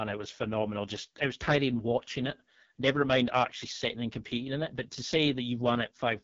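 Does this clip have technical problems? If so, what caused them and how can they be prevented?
Yes. AMR wideband (HD Voice) codec damage runs throughout the speech, with nothing above 7.3 kHz. The heavy roughness and raspy texture suggest the codec's lowest rate, around 6.6 kbit/s, where its pulse-driven vocal model is starved of bits and the top band is filled with noise. To prevent it, send the call at 12.65 kbit/s or higher, or use a wider-band codec.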